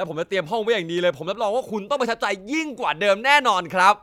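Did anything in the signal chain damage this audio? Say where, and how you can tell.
No, nothing in this speech clip shows signal-chain damage.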